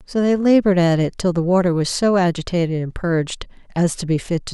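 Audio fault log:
No fault is heard anywhere in the speech.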